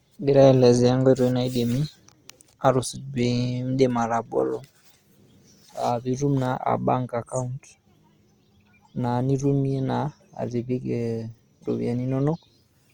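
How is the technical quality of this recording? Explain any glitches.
Technical quality is held back by one fault that runs the whole length of the speech, plainly audible Opus compression.

Opus compression, throughout: the encoder is likely Opus in its CELT music mode. When bits run short it keeps each band's energy but fills the band with folded copies of lower bands or with noise, so the speech turns grainy and rough rather than swirly. Content extends to about 20.1 kHz, so the band is not narrowed, and the roughness fits a rate near 24 kbps.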